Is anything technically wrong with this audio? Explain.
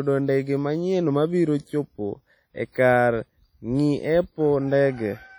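Yes. Throughout the speech there is a ringing, washy quality with a hiss that swells and fades with the signal. This points to likely WMA compression at a low bitrate around 32 kbps. Long transform blocks smear quantisation noise over tens of milliseconds and zero out weak spectral lines. On a spectrogram this looks like blotchy, patchy high-frequency detail with gaps.

At 2.72 to 2.75 s, just after "manyien mabiro chopo e", there is pre-echo. The codec spread noise meant for a sharp attack back over the quiet moment before it, about 29 ms. This puts a short hiss ahead of the onset and softens it. The waveform shows a low noise smear before the attack's edge.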